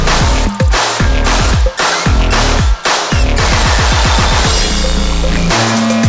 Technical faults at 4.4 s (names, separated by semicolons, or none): wrong sample rate